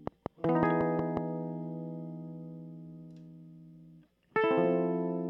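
A music clip, opening with a train of clicks from 0.07 to 1.18 s. About seven similar pulses tick over the music at a regular 5.5 per second. They stand roughly 20 dB above the music. The likely cause is nearby equipment interference or a faulty connection or power supply.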